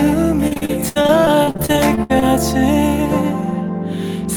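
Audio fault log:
0.47–2.23 s, repeated packet loss (robotic sound): 18 gaps, the longest 69 ms, are patched by repeating the preceding sound for about 30% of this stretch, which makes it choppy. Unlike a single dropout, the gaps recur in quick succession and are filled rather than silent.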